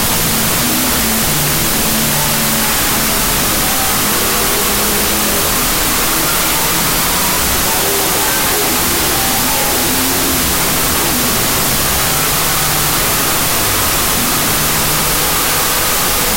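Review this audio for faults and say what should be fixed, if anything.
A wrong sample width runs through the whole clip. Loud, harsh noise dominates from start to finish, with the original sound buried underneath, playing at half speed and an octave low. That fits 32-bit float data being read as 16-bit integers. Each real sample is split into two mismatched values, doubling the sample count and turning the float bytes into noise. A wrong byte order would keep speed and pitch intact, and a wrong sample rate would slow the sound without the noise. To prevent it, carry the sample format in the file header and read the data with that format, not an assumed one.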